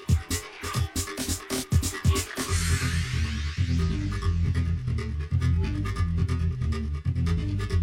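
From start to finish the sound carries channel delay (comb filtering). One channel arrives roughly 20 ms behind the other, and when the two are folded to mono, any content shared by both cancels at a series of evenly spaced frequencies. The first notch sits down around 20 Hz, with further notches repeating up through the spectrum at regular intervals. The result is a constant rough, slightly doubled quality that never shifts.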